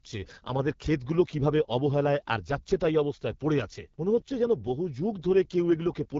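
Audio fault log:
Throughout, AMR wideband (HD Voice) codec. The speech sounds rough and raspy, with plainly audible coding damage. That fits one of the two lowest AMR-WB rates, likely about 8.85 kbit/s. The top band is filled with shaped noise. Nothing sounds above 7.5 kHz.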